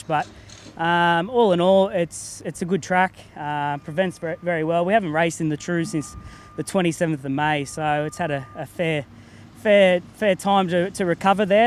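Nothing in this audio stood out on listening as a technical problem.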